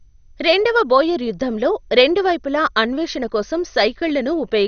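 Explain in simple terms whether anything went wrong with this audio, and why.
Something did go wrong, and it lasts the whole clip. The speech sounds dull and muffled, with a gurgling, grainy roughness on the words. Nothing can be heard above about 6.5 kHz. The likely cause is MP2 compression with too little data to work with. This format splits sound into narrow frequency bands and shares out a small budget among them. The upper bands get nothing and go silent. The rest are stored so coarsely that they bubble and flicker.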